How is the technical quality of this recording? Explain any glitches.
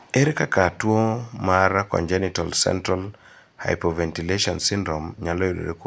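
No glitches to report: nothing in the speech recording registers as a technical fault.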